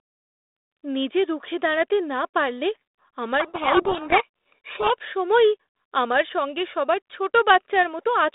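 From 3.4 to 4.91 s the speech is buried under harsh, grinding distortion, the mark of a codec payload misread. The line carries G.726 ADPCM at 32 kbit/s, band-limited to roughly 250 Hz to 3.7 kHz, and for this stretch the receiver unpacks each code word with its bits in the wrong order. The decoder then applies wrong difference values to its adaptive predictor, producing rasping noise until the packing matches again.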